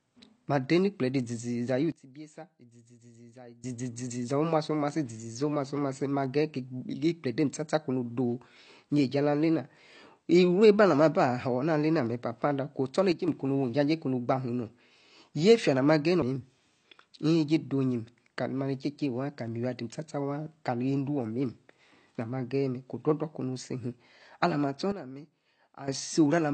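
A speech recording carrying AAC compression damage from start to finish, plainly audible as a dull, smeared quality with a watery, fizzy edge on sibilants, and nothing at all above 8.7 kHz. The likely cause is low-bitrate AAC-LC encoding, with the damage level fitting something near 32 kbps, where the encoder drops the top band and leaves gaps in what remains. On a spectrogram this shows as a hard ceiling at 8.7 kHz and patchy, blotchy holes below it. Three sudden gain jumps also occur, likely from gain changes applied instantly rather than ramped: the level falls by about 18 dB from 1.92 to 3.64 s, by about 6 dB from 13.12 to 13.28 s just after "alena papa adah", and by about 12 dB from 24.92 to 25.88 s just after "luim alah ma astor". Speech and background noise drop together each time. In the waveform each appears as a vertical step down in the envelope at the start and a step back up at the end, and the spectrogram shows matching darker vertical bands.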